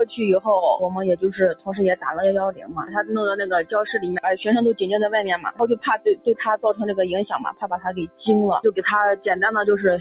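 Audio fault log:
throughout: noise suppressor applied to music or sounds. A suppressor tuned for speech treats steady tones and tails as noise. It pulls them down by around 15 dB, so held sound pumps and thins while attacks get through. The band stops at 4 kHz, which fits a G.711 A-law call path.
1.54–1.76 s, 2.52–3.11 s, 5.37–5.60 s, 5.76–6.27 s, 7.50–8.19 s: sound cut by the noise suppressor. Each time the suppressor misreads sustained or fading sound as noise. Level sinks by about 15 to 17 dB, then the level recovers.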